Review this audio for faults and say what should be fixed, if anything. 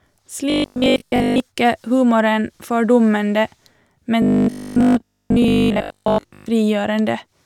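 Robotic sound from repeated short buffers at 0.5 to 1.4 s, just before "ikke humoren fordummende", and again at 4.22 to 6.46 s: the speech becomes a rigid metallic buzz at 50 Hz. This is likely caused by a 20 ms chunk being replayed over much of each stretch while fresh audio was skipped. Preventing it means keeping the playback buffer fed, with a larger jitter buffer or better scheduling so audio arrives on time.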